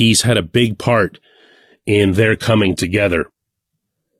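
At 1.15 s the speech steps abruptly down in quality and stays there to the end: an adaptive stream at a lower bitrate. Codec artefacts rise, consistent with a switch from a full-band AAC stream near 96 kbit/s to a spectral-band-replication HE-AAC stream around 20 kbit/s. Unlike a dropout or a reconnect, there is no gap or skip, just an instant, lasting change in timbre.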